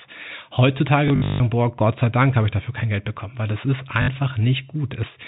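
From 1.08 to 1.4 s, and again at 4.02 to 4.08 s just after "weil das ist", packet loss with last packet repeated makes the speech stutter robotically. Replayed segments buzz near 50 Hz, which fits 20 ms packets. The waveform shows identical repeating blocks, and the spectrogram shows frozen harmonics.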